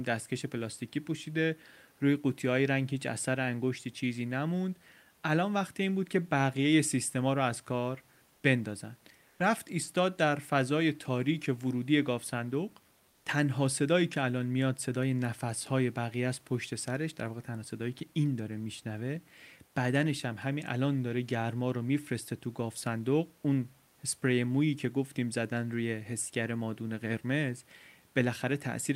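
Comfort noise in place of the background at 8.35, 9.29 and 13.09 s, lasting 80, 100 and 160 ms: the room's detailed noise gives way to flat, featureless hiss, about 2 dB quieter, then level, then about 6 dB quieter, likely from discontinuous transmission during pauses.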